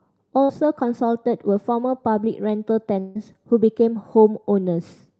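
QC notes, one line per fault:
0.43–0.52 s, burst of packet loss: a short run of packets went missing or showed up too late, so the receiver covered the hole by carrying the last bit of sound forward for about 54 ms and fading it down. You hear that as a brief buzzy or hissy smear. When the speech picks up again it's jumped ahead, with roughly 60 ms of the original just gone, so the join sounds like a small clipped-out chunk.
3.00–3.18 s, long network dropout: here the sound gets held and stretched for about 153 ms, a buzz or hiss that keeps decaying rather than cutting straight to silence, and it never fully empties out before the speech comes back. About 160 ms of real audio is skipped, so the return lands further on. The length of the gap and the way it's papered over likely point to a longer loss of the network stream, not just a couple of dropped packets.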